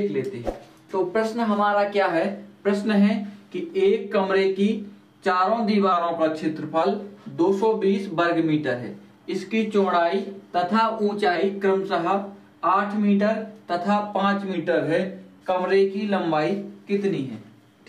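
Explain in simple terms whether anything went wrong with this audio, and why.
Yes. Four times the sound suddenly plays about 6% fast or slow, shifting pitch by roughly a semitone, then snaps back: up from 0.49 to 2.11 s, down from 5.92 to 6.83 s, up from 10.74 to 11.36 s, down from 14.54 to 15.41 s. This is likely a drift correction step, where clock-matching software abruptly changes playback rate to keep its buffer level. Unlike tape wobble, which slides gradually, these changes jump in and out cleanly.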